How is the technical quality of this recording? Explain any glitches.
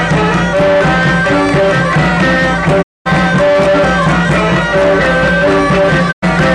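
The recording has two digital broadcast dropouts, at 2.81 to 3.08 s and 6.11 to 6.24 s. The receiver stopped getting decodable frames and muted, so the sound fades out over about 20 ms and leaves holes of about 224 ms and 96 ms. Whatever was broadcast during those gaps is gone.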